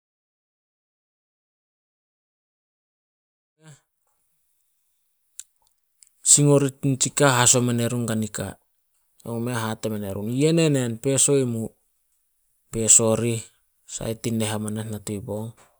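No faults are audible in the speech; the smooth fade-in, which begins at around 3.5 s and reaches full level at 4.41 s, is a deliberate edit rather than a defect.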